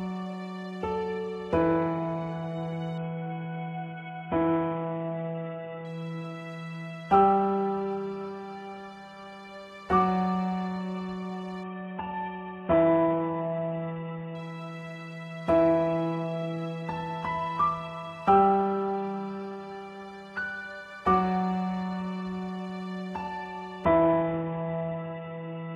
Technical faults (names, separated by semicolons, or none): Bluetooth SBC bit pool drop